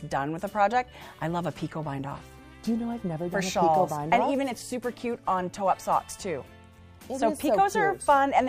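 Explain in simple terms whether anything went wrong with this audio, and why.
Nothing stood out on listening; no part of this recording suggests that anything went wrong.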